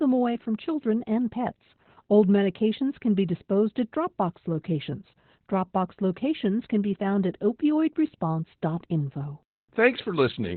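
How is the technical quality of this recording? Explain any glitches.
Technical quality is poor, because heavy Opus voice compression runs through the whole speech clip. Nothing survives above 4.3 kHz, so the coder is working narrowband in its SILK linear-prediction mode, and the speech sounds muffled, hoarse and faintly robotic. The coarse excitation suggests a bitrate around 8 kbps. A spectrogram would show energy ending abruptly at a flat ceiling near 4.3 kHz, with smeared harmonics below it.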